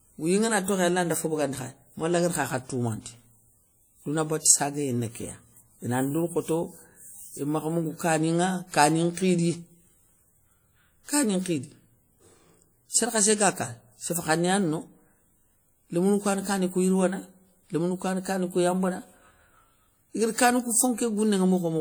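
All the way through, the speech has a ringing, washy quality and a hiss that swells and falls with the signal, which points to likely WMA compression at a low rate, around 48 kbps, smearing quantisation noise over long transform blocks. Content reaches up to about 20.1 kHz.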